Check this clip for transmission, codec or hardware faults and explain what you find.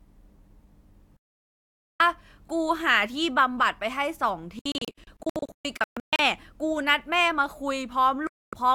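Three digital broadcast dropouts. At 1.17–2.00 s the speech cuts to silence. At 4.59–6.20 s it breaks into scattered short holes, the longest about 128 ms. At 8.27–8.53 s it cuts again. The receiver muted on lost or corrupt frames, so that speech is gone.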